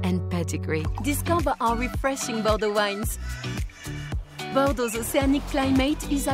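No technical faults can be heard anywhere in this recording.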